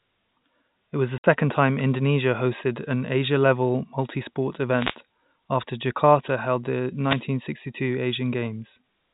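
Right after "was the", from 1.18 to 1.24 s, there's packet loss filled with silence: a 60 ms hard-edged hole, which fits three 20 ms packets dropped. Then come two wireless microphone noise hits, at 4.68 to 4.97 s (just before "after jakarta held") and 6.99 to 7.27 s. Each is a short swish of static as the radio signal fades and receiver noise rises, all heard through the G.711 phone band that stops at 4 kHz.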